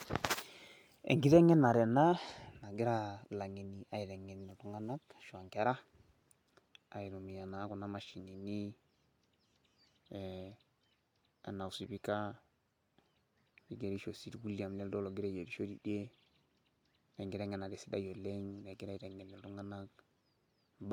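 Nothing technically wrong turns up anywhere in this speech recording, so there's no fault to pin to a time or trace back to a cause.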